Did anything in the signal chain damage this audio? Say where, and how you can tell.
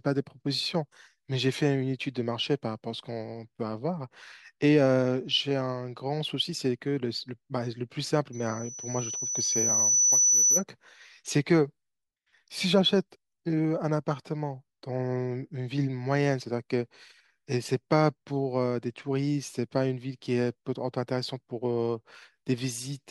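Yes: loudspeaker feedback squeal, 8.32 to 10.64 s, in the acoustic microphone-loudspeaker loop. A 6 kHz tone swells over about two seconds above the speech, because loop gain exceeds one there.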